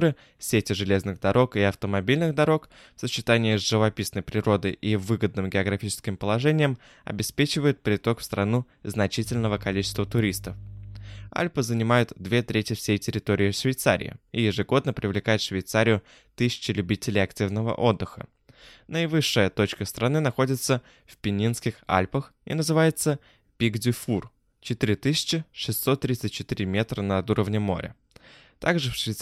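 From 9.23 to 11.31 s there's a stretch of mains hum: a steady 50 Hz drone, plus its low harmonics, sitting well under the speech. That points to a ground loop or nearby transformer briefly coupling the power line into the signal.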